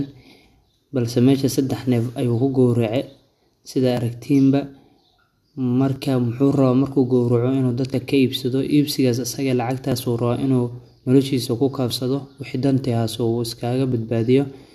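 Brief skips occur at 3.97, 5.96, 7.94, 9.92, 11.91–11.93 and 13.92 s. This is overlap between stream segments, roughly every 2 s. Trimmed overlap deletes real audio, so the waveform jumps.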